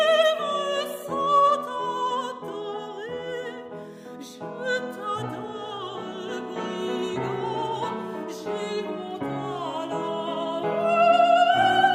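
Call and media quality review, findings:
No faults found on review. Nothing to escalate for this clip.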